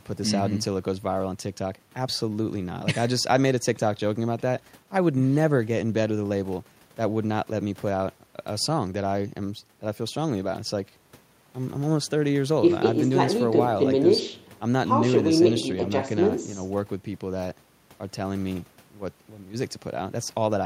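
A speech recording with nothing technically wrong with it.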